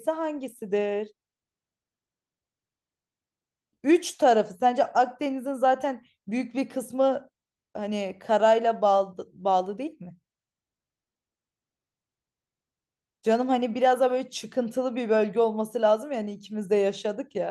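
There are no technical faults to describe in this speech recording.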